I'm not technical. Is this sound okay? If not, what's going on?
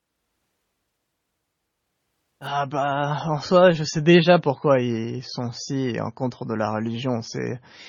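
No. At 2.47 s the speech suddenly gets duller and fuzzy, and it stays that way until the end. This is an adaptive stream at a lower bitrate. The connection slowed, so the player switched to a smaller, cheaper copy of the audio without pausing. To save data, that copy throws away the crisp top end, leaving nothing above 7 kHz. It also adds more codec artefacts. That is why the change is abrupt but has no gap.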